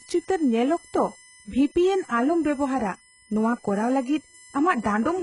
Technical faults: USB whine; HE-AAC compression

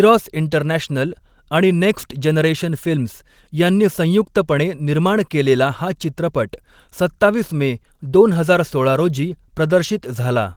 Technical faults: none

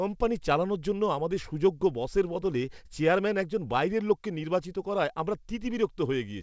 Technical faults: none

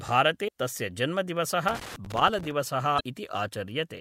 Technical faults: damaged data in a compressed stream; loose connector crackle

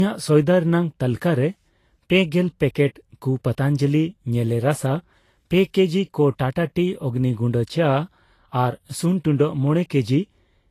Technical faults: low-bitrate audio saved at a high bitrate

